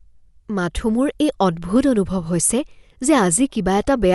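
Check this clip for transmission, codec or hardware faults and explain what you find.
One fault runs through the whole recording: the speech has a hard band limit and audible coding damage, most likely from Dolby Digital compression at a low bitrate, which fits around 64 kbps. With too few bits, the encoder discards everything above 11.5 kHz and leaves many frequency lines with no precise values, so the decoder fills them with noise. The voice sounds dull, with a rough, fluttering grain. A spectrogram shows a flat ceiling at 11.5 kHz and speckled, patchy energy below it.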